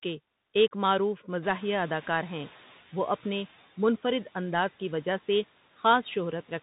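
Throughout, the speech sounds boxed-in and scratchy, with a granular hiss underneath and nothing above about 3.8 kHz. This is the Bluetooth CVSD headset codec. Its one-bit up/down steps, which fit a 64 kbps link, lag on fast, loud high content, so sibilants turn gritty.

From 1.42 s to 2.78 s, a background noise that jumps about 17 dB near the one-and-a-half-second mark first comes through with less reduction, then sinks by about 7 dB over 1.36 s. The noise suppressor is catching up: its noise estimate trailed the sudden rise.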